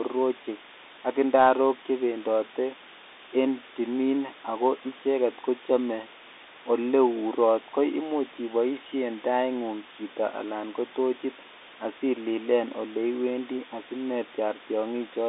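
From start to finish the speech sits on a steady, even hiss, the sign of low bit depth with dither. Its level, only around 15 dB below the speech, points to roughly 6-bit audio with noise added before rounding, so the rounding error becomes smooth white noise rather than distortion. A spectrogram shows a uniform grey haze across the whole passband. The waveform shows no clean silences, just a constant noise floor.

Across the same whole clip, the Bluetooth CVSD headset codec narrows the sound to roughly 200 Hz to 3.7 kHz. On a spectrogram, nothing appears above 3.8 kHz. The one-bit adaptive coding, which fits a 64 kbps stream, audibly fails to track loud high sounds. S sounds turn scratchy, and a granular hiss runs beneath the speech.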